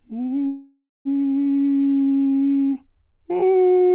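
A short piece of music heard over a narrowband call link, with nothing above 4 kHz, which points to a G.711-type telephone codec. At 0.47 s the music stops moving and the last sound carries on as a fading buzz that sinks into about 0.21 s of silence before the music resumes at 1.08 s, exactly where it left off. That is a call audio freeze: packets were likely held up in transit, the jitter buffer ran dry, and the receiver stretched the final fragment until new audio arrived. The result is a pause of roughly 0.58 s inserted into the music with nothing lost. Around 1.44 s the opposite happens: the music lurches forward, with a seam of only about 14 ms bridging the join, and roughly a fifth of a second of material simply vanishes. This is a skip ahead, where a stretch of audio was discarded, either dropped on the way or cut by an overfull jitter buffer while later audio was already queued, so the two sides are butted together. 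From 1.56 to 2.75 s the music drags at about 84% of normal speed with the pitch unchanged, sounding held. That is a jitter buffer slow-down: the receiver repeated single pitch periods over and over to rebuild its reserve, adding 200 ms in total.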